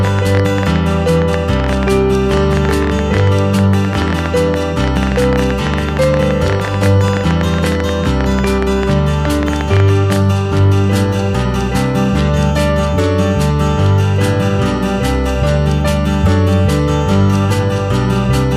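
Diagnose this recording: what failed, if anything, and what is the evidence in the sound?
A train of clicks ticks and pops over the sound from 0.05 s to 10.17 s: around a hundred similar pulses at about 12 per second, unevenly spaced, peaking about 10 dB above the audio. The likely stage is analogue wiring picking up interference from nearby equipment.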